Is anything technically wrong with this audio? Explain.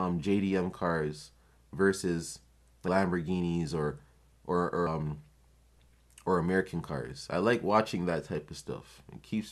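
Yes. Compressed frames are skipped at 2.88 s, just after "cars versus," and again at 4.86 s. At each point the decoder plays nothing for a run of whole frames that are either missing or were rejected as damaged. The speech jumps forward by about five frames, roughly 150 ms, at the first event and by about seven frames, roughly 200 ms, at the second. Both jumps fit a frame length of about 26 ms. Because neighbouring frames overlap, each join is heard as a short smeared blip rather than a sharp click.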